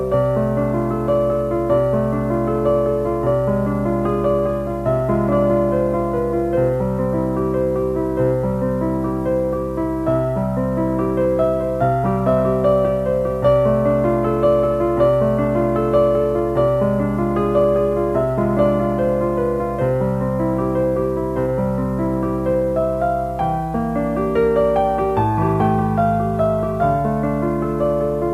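From the first second to the end, a steady mains hum sits under the sound at 60 Hz. Power-line current is leaking into the signal path, most plausibly through a ground loop between connected equipment or magnetic pickup from a nearby transformer. The hum is a constant low drone about 15 dB below the program. It does not change in pitch or level.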